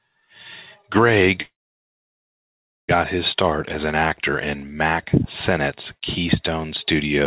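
At 1.42 s there's a call audio freeze: about 1.4 s of silence, nothing lost, then it picks up at "his start as an". Likely packets stalled and the jitter buffer ran dry.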